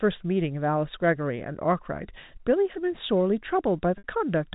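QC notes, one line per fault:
3.98–4.04 s, packet loss with pitch repetition: about 60 ms of the G.711 telephone stream went missing, which fits three 20 ms packets. The receiver bridged it by repeating the last pitch period and fading it out, so the speech briefly holds a buzzy, frozen tone.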